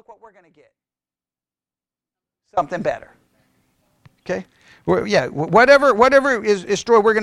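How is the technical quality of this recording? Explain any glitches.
The main glitch is an audio dropout to a faint residue that's already under way when the clip starts and runs to 2.57 s. The gap holds only a faint sound about 25 dB below the speech's normal level, likely a broken signal path that stayed live, then the speech snaps back abruptly rather than fading in.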